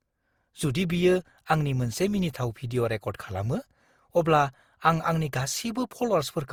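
Throughout, the speech was likely re-encoded about seven times, fitting a 64 kbit/s Opus chain; this generation loss sounds swirly, hollow and smeared, blurring attacks.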